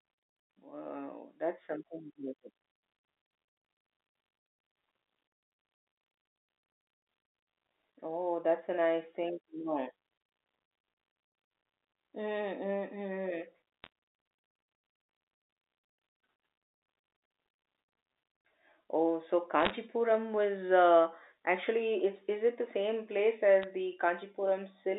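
Bit errors on the digital phone line give brief bursts of crackle at 13.84 to 13.87 s, 19.60 to 19.70 s and 23.62 to 23.64 s. Flipped bits corrupt single samples, causing sharp ticks.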